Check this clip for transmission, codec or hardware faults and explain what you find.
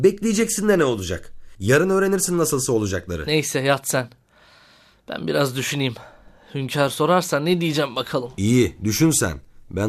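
No transmission, codec or hardware fault can be heard anywhere in the speech, so there is nothing to report on its technical state.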